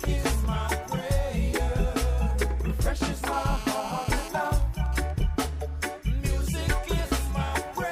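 From 3.33 to 4.28 s a hard, raspy GSM phone buzz sits about 15 dB below the audio. A 2G handset on a call transmits 217 bursts a second, and the audio circuit rectifies them. A spectrogram shows a 217 Hz line with a dense comb of harmonics, and the waveform shows a regular pulse train. From 4.38 to 5.23 s come GSM signalling bursts at around 20 dB down, even ticks with a longer 217 Hz buzz twice a second from a phone on a call while its user is silent. These appear as evenly spaced vertical stripes rather than a steady band.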